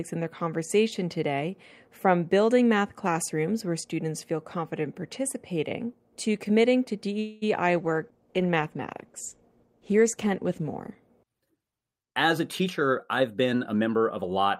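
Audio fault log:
7.19 to 7.44 s, call audio freeze: the sound stalls for about 0.22 s, filled by a fading continuation of the last sound rather than silence, then resumes where it stopped with nothing lost. Likely packets were held up and the jitter buffer ran empty, inserting a gap.
7.76 to 11.04 s, call bitrate drop: the sound turns coarse and degraded after the encoder's rate falls from 64 to 15 kbps, staying at that lowest rate for about 3.2 s. A shrinking bandwidth estimate forced the codec to spend far fewer bits.
12.08 to 14.24 s, jitter buffer speed-up: the sound runs hurried at about 110% speed while keeping its pitch, with roughly 0.2 s taken out in total. The receiver was trimming short pitch-period pieces repeatedly to shed excess buffered delay.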